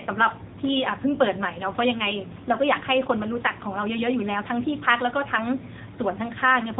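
A speech clip carrying AMR narrowband mobile codec damage from start to finish: nothing passes above about 3.8 kHz, and the voice sounds plainly buzzy and synthetic, as the vocal-tract model with sparse pulse excitation is starved of bits, which fits the 7.95 kbps AMR-NB mode.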